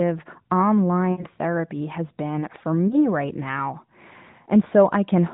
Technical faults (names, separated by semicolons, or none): lost AMR speech frames